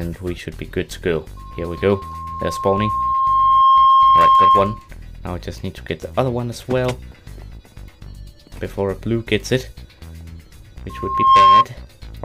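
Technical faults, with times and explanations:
1.37–4.89 s and 10.89–11.65 s, loudspeaker feedback squeal: a steady 1.1 kHz tone swells over about two seconds, then under half a second, to roughly 15 dB above the sound. The loop gain exceeds one there, so it self-reinforces. The spectrogram shows a bright horizontal line; the waveform shows a swelling envelope.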